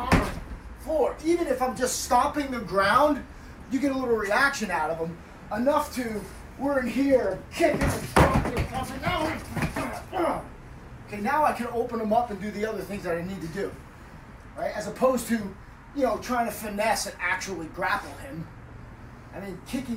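At 18.48 s there's a single sharp click, most likely dropped samples: a handful go missing, a fraction of a millisecond, so the waveform jumps abruptly.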